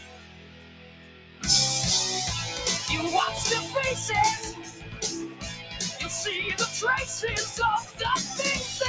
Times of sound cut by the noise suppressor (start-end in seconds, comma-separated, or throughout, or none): 0.00-1.44, 4.52-5.02, 5.28-6.01, 7.82-8.01